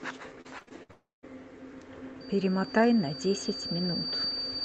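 Speech carried over an Opus call path shows repeated packet loss (robotic sound) from 0.41 to 0.91 s. Five gaps came in quick succession, the longest 63 ms, and the receiver patched each by stretching the last sound, so about 36% of that span is synthetic and choppy. A long network dropout is the likely cause of the hole from 0.91 to 1.25 s. The concealment buzz fades, with 150 ms of near-silence before the audio resumes, and that part is simply gone. Loudspeaker feedback squeal begins at 2.20 s and runs to the end. A microphone picking up its own loudspeaker made the loop gain exceed one at 4.6 kHz, so a single tone swells over roughly two seconds until it is about as loud as the speech.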